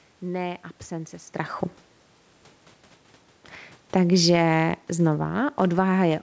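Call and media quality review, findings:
Automatic gain falling, 3.89 s to end: the AGC judged the input too hot or too noisy and ramps gain down. The waveform envelope and noise floor shrink together, and the spectrogram dims evenly.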